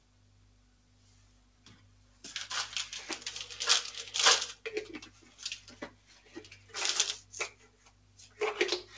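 A recording of everyday sound, heard through a call path whose bandwidth stops at 8 kHz (consistent with G.722 at 64 kbps), is being processed by a speech-tuned noise suppressor applied to sounds. The suppressor treats steady tones and ambience as noise, so the level swings by about 10 dB and the sound pumps. On a waveform the envelope breathes unevenly, and a spectrogram shows sustained bands fading while onsets stay bright. Sound cut by the noise suppressor sinks by up to about 6 dB from 0.0 to 2.23 s, 5.1 to 5.39 s, 5.91 to 6.32 s and 7.55 to 8.37 s. These show as dips in the waveform envelope and dimmed, truncated decays on the spectrogram.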